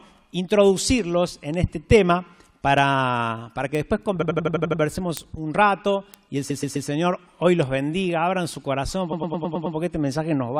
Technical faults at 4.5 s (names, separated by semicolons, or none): word clock ticks; repeated frames